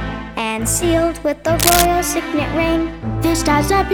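From 1.59 to 1.86 s there's a burst of cable scratch noise, ragged rustling about as loud as the sound itself, likely a worn lead or connector being moved.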